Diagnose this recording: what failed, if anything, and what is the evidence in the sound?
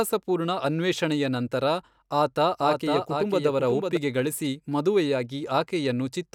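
A second capture path, likely a slower routing or a misaligned edit, mixed the speech in twice. From 2.61 to 3.97 s, just after "ಅನ್ವೇಷಣೆಯ ನಂತರ ಆತ", a full-band doubled audio track trails about half a second behind, a few dB quieter, dry, and starting and stopping abruptly.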